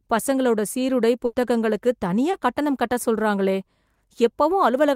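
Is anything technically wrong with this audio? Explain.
Yes, there are two faults in this speech.

Burst of packet loss at 1.25 to 1.35 s, right after "பசங்களோட சீருடை": about 80 ms never arrived, so the receiver stretched the last sound out, fading it down, then skipped ahead.

Short concealed packet loss at 2.31 s, just before "கட்டணம் கட்ட சொல்றாங்களே": roughly 20 ms went missing and was patched by extending the preceding sound, leaving a brief smear.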